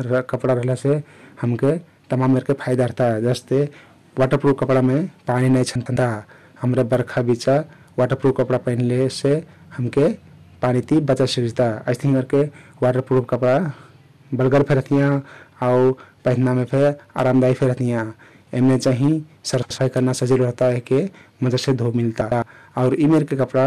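Hard clipping runs through the whole speech clip. The level is driven about 12 dB past what the chain can pass, so a few percent of samples hit the ceiling. The waveform shows flat-topped peaks, and the spectrogram shows harmonic smear reaching high up on loud syllables. It is heard as a harsh fuzz on every loud sound.

Frames out of order occur three times: 5.75 to 5.97 s, just after "कपडामे पानी नाई"; 19.63 to 19.78 s; and 22.21 to 22.42 s. In each, two adjacent blocks of about 105 ms (78 ms in the second) play with their halves swapped. This produces a garbled flutter.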